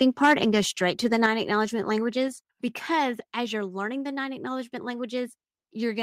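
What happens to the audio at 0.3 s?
At 0.3 s the speech is inside a stretch of microphone overload running from 0.01 to 0.34 s, just before "and go straight to". The input is driven about 6 dB past full scale, most likely from the microphone's input volume being set too high. The loudest peaks are cut flat at the converter's limit, giving a harsh, crackly edge. On a waveform a small share of the peaks appear as flat-topped plateaus, and a spectrogram shows smeared high-frequency energy above the voiced harmonics.

Just before that, at 0.25 s, there is a microphone volume step-down. The level of the speech and the background drops by about 2 dB in a single step, likely because the call software reacted to the clipping by lowering the device's input gain. On a waveform the envelope shrinks slightly at that instant, and a spectrogram shows a faint, uniform darkening across all frequencies.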